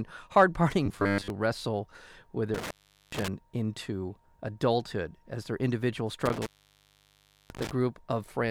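From 0.86 to 1.30 s the speech becomes a rigid, metallic 100 Hz buzz, robotic sound from repeated short buffers, likely from one 10 ms chunk replaying while most of the real audio is skipped. Between 2.54 and 3.28 s, and again between 6.26 and 7.71 s, the sound breaks up and drops out, an intermittent contact opening the line for 417 ms and then about 1.04 s.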